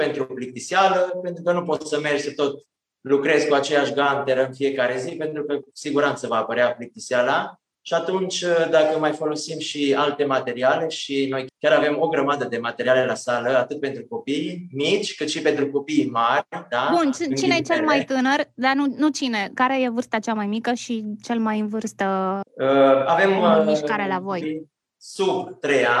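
Nothing in this audio calls for comment, since no technical faults turn up anywhere along its run.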